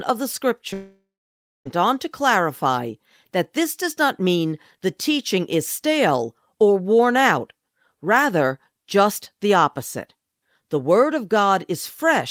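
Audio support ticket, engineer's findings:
Long network dropout, 0.73 to 1.67 s. Speech cuts out, tail smeared into a fading buzz, then roughly 0.6 s of dead air. Resumes with about 0.92 s of speech gone. Likely the receiver's loss concealment papering over a stalled stream.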